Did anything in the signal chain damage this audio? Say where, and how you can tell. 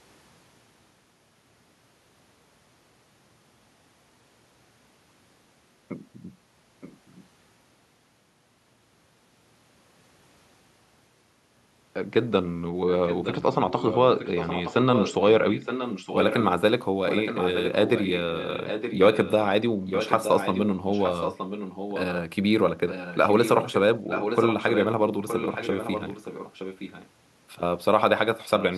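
Yes, in call processing: an echo leak, likely from a far-end loudspeaker whose echo canceller let sound through. A copy of the speech returns about 0.92 s late at 6.81–7.24, 13.06–16.48, 17.07–19.47, 19.87–22.04, 22.88–23.77, 24.09–24.87, 25.28–27.09 and 28.59–28.78 s, faint at first, then fairly strong. A spectrogram shows fainter duplicate harmonic patterns trailing the originals.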